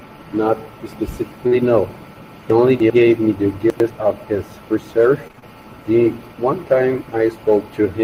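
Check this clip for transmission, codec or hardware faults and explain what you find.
Yes, the clip has transmission faults: one brief concealed dropout, two places where chunks of the speech play out of order, and a short burst of repeated packet loss.

Short concealed packet loss at 1.47 to 1.53 s. About 40 ms of the speech never reached the decoder in time, and the receiver covered the hole by extending the preceding sound, pitched if voiced, noise-like if not, before crossfading back into the real signal. It is heard as a quick smear or wobble, and a brief consonant there may disappear.

Chunks out of order at 2.50 to 2.90 s and again at 3.70 to 3.90 s. Each displaced chunk is 100 ms long. In the first, a chunk plays three chunks later than it should; in the second, one chunk late. No audio is missing, but the sequence is scrambled, with abrupt splices at each boundary. Both stretches sound jumbled.

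Repeated packet loss (robotic sound) at 5.27 to 5.44 s. Across this 0.16 s stretch, packets went missing over and over, each hole no longer than 25 ms. Every hole was patched by continuing the last sound, only for the next loss to follow almost immediately, so about half the span is synthesised fill. The result is choppy, with fragments of the speech dropped out.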